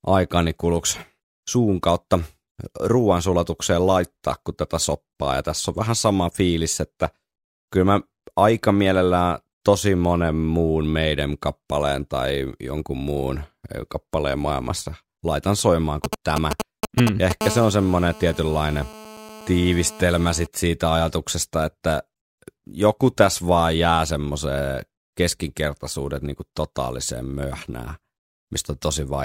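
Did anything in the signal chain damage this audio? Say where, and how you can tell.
Yes. GSM signalling bursts appear from 16.04 to 17.32 s, right after "kappaleen maailmassa laitan soimaan". This is damage in the analogue wiring stage: a nearby 2G phone is exchanging short radio bursts with its network, and some unshielded input or cable rectifies them into audio. You can tell from the galloping dit-dit-dit of ticks and brief buzzes pulsing at about 217 Hz, roughly as loud as the speech and unrelated to it.

The GSM phone buzz follows at once, from 17.41 to 20.47 s, ending just before "siitä ajatuksesta että". The same analogue path is picking up the phone's transmitter, now bursting continuously at 217 times a second as it does during a call. Rectified, that pulse train becomes a hard, raspy 217 Hz buzz rich in harmonics, sitting steadily about 15 dB below the speech. Its rigid, mechanical pitch, which ignores the speech entirely, marks it as radio interference and not acoustic noise.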